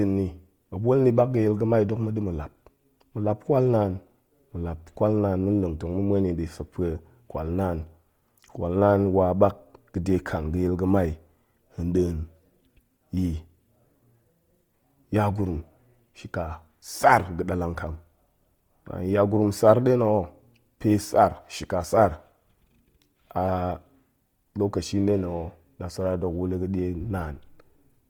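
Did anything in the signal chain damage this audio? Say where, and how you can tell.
Yes, at the codec stage, throughout the speech. The sound is grainy and rough, with tonal parts of the voice turned noisy instead of hollow or swirling, yet bright content reaches all the way to about 20.2 kHz. That points to Opus compression in its music mode at a low rate, likely around 24 kbps, which keeps every band's energy and fills starved bands with noise or folded copies. A spectrogram shows full-height energy but smeared, speckled texture with no clean gaps.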